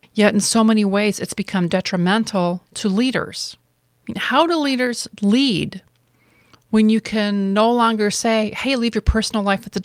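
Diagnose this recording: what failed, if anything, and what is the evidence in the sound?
Nothing in the chain seems to have failed here: the speech comes through steady and unbroken, with nothing in the sound pointing to trouble at any stage.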